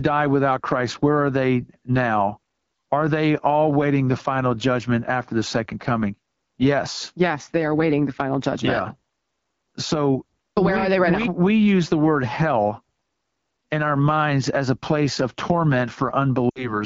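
Throughout, the speech sounds rough and raspy with a thin, hissy top, the plainly audible damage of the AMR wideband (HD Voice) codec running at a low 8.85 kbit/s. From 16.50 to 16.78 s, the sound smears and drops away, then returns weak: lost AMR speech frames, about 60 ms of them, bridged by the decoder repeating fading speech parameters.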